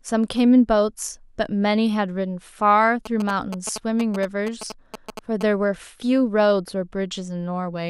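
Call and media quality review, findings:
GSM signalling bursts, 3.06–5.43 s: galloping dit-dit-dit of short buzzes over the speech, roughly 10 dB under it. Nearby 2G phone signalling; audio circuit rectifies the RF bursts, giving the 217 Hz buzz rate.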